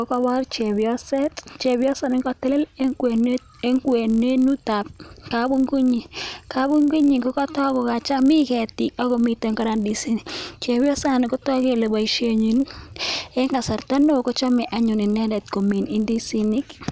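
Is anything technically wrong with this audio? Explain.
Yes. The resampler restarted on every block, throughout the speech. Each block of about 20 ms was converted on its own, apparently from 44.1 kHz down to 16 kHz. At every block edge the converter lacked the real neighbouring samples. So each edge carries a small error. Those errors repeat at 50 per second. The result is a buzz at 50 Hz riding on the voice. It is heard only while sound is present and drops away in pauses.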